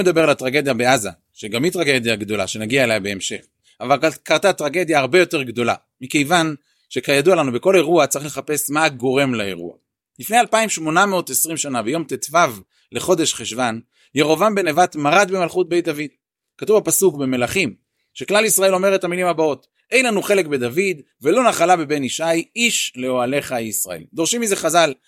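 From about 0.2 s to 6.7 s the speech carries periodic USB or driver dropouts: roughly every 0.5 s a tiny sliver of audio, a small fraction of a millisecond, is skipped outright, leaving a splice that clicks. Around fifteen such ticks fall in that span. Random clicks come at irregular moments; these keep a strict, clock-like spacing and sound only where speech is present. That points to a background task stalling the USB bus or audio driver on a fixed schedule.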